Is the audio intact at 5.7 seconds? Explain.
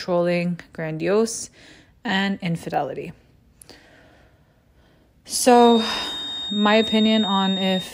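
No. At 5.7 seconds a feedback whistle is present, running from 5.50 s to the end of the clip at 7.93 s. A thin, steady tone near 3.7 kHz sits roughly 10 dB below the speech and swells and fades slowly in level. The likely cause is a loudspeaker-to-microphone loop held just at the edge of feedback, so one frequency rings on without growing. On a spectrogram it shows as a single unbroken horizontal line at 3.7 kHz across that span.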